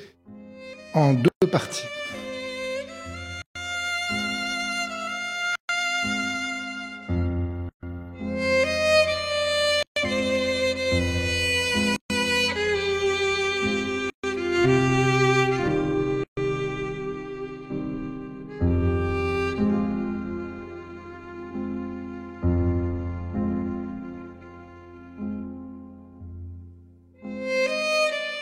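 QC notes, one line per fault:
1.28 to 16.37 s, gap at a join of encoded pieces: dropouts of about 136 ms at 1.28, 3.42, 5.55, 7.69, 9.83, 11.96, 14.10 and 16.24 s, one every 2 s. Untrimmed encoder start delay and last-frame padding leave silence with smeared edges before the sound resumes where it stopped.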